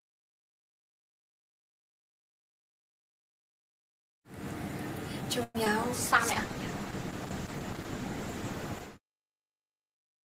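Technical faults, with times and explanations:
5.43 to 5.57 s, call audio freeze: the sound stalls and the last bit gets stretched into a fading buzz for about 110 ms, dipping to near-silence for roughly 10 ms before resuming. The likely cause is packets stuck in transit that drained the jitter buffer. Nothing is lost, but everything after lands about 110 ms late.
5.65 s, short concealed packet loss: about 20 ms never reached the decoder in time. The receiver papered over roughly 13 ms of it by extending the previous sound, then blended back into the real audio. You hear it as a quick smear or wobble.
5.96 s to the end, call bitrate drop: the bandwidth estimate sank and the encoder went from 32 to 11 kbps, staying at the bottom for about 4 s. The top end falls from 20 kHz to 12 kHz, and the coarser coding makes the audio sound dull and watery.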